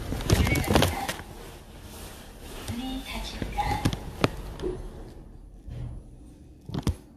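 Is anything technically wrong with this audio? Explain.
Yes, generation loss runs through the whole clip. The audio was likely re-encoded with a lossy codec around four times, consistent with repeated AAC-LC passes at 64 kbit/s. Each pass adds fresh quantisation noise, so the sound turns swirly and hollow, attacks smear, and nothing remains above 14.2 kHz.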